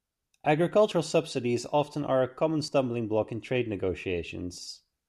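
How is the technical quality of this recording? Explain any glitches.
There is one audible glitch in this speech recording. At 2.68 s, between "often are a common" and "block in trade", the sound jumps forward with no gap of silence, as though a sliver of about 40 ms was snipped out and the edges butted together. This is likely a dropped buffer (overrun): the recording software failed to collect a block of samples before the hardware overwrote it, so that stretch was lost.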